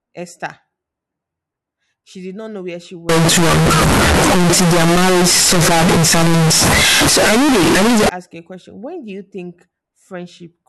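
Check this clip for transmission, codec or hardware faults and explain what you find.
One fault is present. Float read as integer, 3.09 to 8.09 s, between "not know where she" and "ask you a question": 32-bit float samples were likely read as 32-bit integers, so sign and exponent bits set each value. The waveform turns nearly square at an almost fixed, high level. It is very loud and harsh, with background noise as loud as the speech, though pitch can still be followed.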